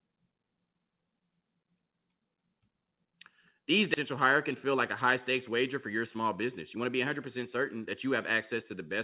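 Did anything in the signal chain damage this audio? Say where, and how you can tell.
Yes. On a call path whose content stops at 4 kHz as G.711 mu-law would, roughly 0.7 s of queued audio was dropped between 3.94 and 3.96 s. This is a skip ahead: the sound jumps forward with no gap, and the two sides are butted straight together.

The jitter buffer then ran a jitter buffer speed-up, cutting out short pitch-period slices again and again to shed excess delay. It ran from 4.26 to 5.07 s at 105% speed, removing about 50 ms, and from 5.90 to 6.86 s at 106%, removing about 70 ms. The pitch holds, but the speech sounds hurried.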